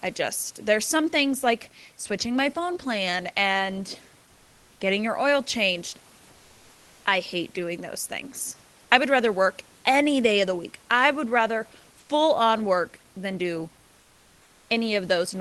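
A speech clip carried over a call link with Opus coding, audible as a top end that stops near 12 kHz. At 11.99 to 12.09 s, sound is dropped by the voice detector: about 100 ms is replaced by flat noise, with roughly 70 ms of real sound lost. This is likely Opus DTX judging quiet sound to be background and halting transmission. From 14.01 to 14.69 s, comfort noise replaces the background for 680 ms. The room noise, about 35 dB below the loud passages, becomes a smooth, detail-free hiss about 2 dB quieter, consistent with the receiver synthesising filler during a DTX pause.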